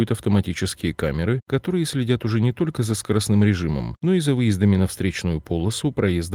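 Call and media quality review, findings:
Nothing to flag on this speech recording; no faults heard anywhere in it.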